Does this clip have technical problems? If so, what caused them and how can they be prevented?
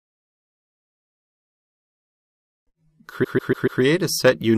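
Yes. Repeated frames occur from 3.23 to 3.81 s: a 144 ms block of compressed audio plays four extra times, giving a stutter and adding 576 ms. The block length fits a short run of frames being resent or rewritten. To prevent it, deduplicate frames by sequence number or timestamp before decoding, and verify that writes and retransmissions don't append data that has already been delivered.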